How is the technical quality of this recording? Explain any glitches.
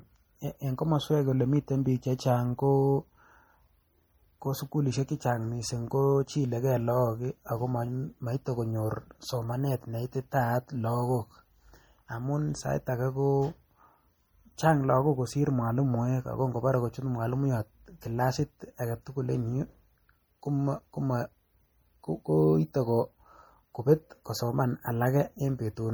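The recording is clearly degraded by lossy compression across its whole length. MP3 compression, throughout: the speech sounds watery and swirly, with s sounds turning metallic, and consonant attacks smeared. This is likely a starved MP3 encoder, fitting a low bitrate near 48 kbps, letting weak spectral detail flicker between frames.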